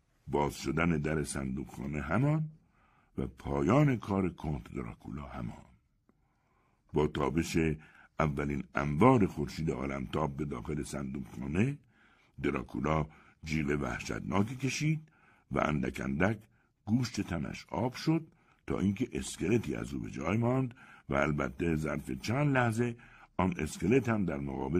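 No technical faults can be heard anywhere in this speech recording. There are no moments that need a timestamp and no problems to trace to a cause.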